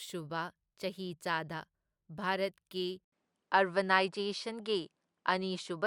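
At 3.04 s the speech drops out for 80 ms. When it returns, nothing sounds above 10.7 kHz, so it is duller. The level shifts a little. Faint new noise sits far below. The input likely switched to a poorer device for the rest.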